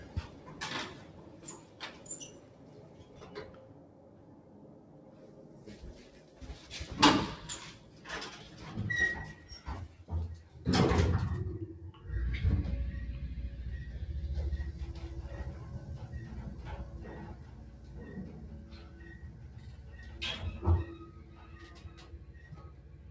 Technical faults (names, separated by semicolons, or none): noise suppressor applied to music or sounds